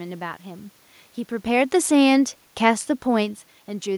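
No technical faults are present in the signal chain: the background noise comes from the room around the microphone, and the changes in level at around 1.5 s and again near 3 s come from the talker shifting position relative to the microphone.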